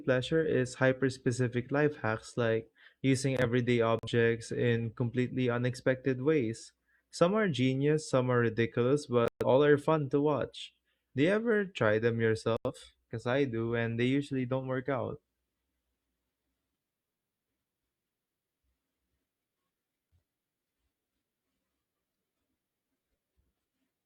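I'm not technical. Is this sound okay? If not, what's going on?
No. The receiver lost the digital signal three times and muted until clean data returned. These are digital broadcast dropouts. The speech cuts to silence at 3.99 to 4.08 s after "hacks like using everyday", 9.28 to 9.45 s after "genius some are ridiculous", and 12.57 to 12.71 s after "you ever try them". Anything sent during those gaps is lost.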